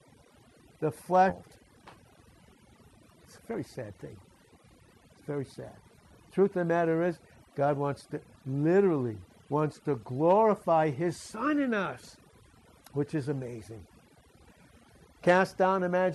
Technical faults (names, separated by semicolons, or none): overdone noise removal; skip ahead; jitter buffer speed-up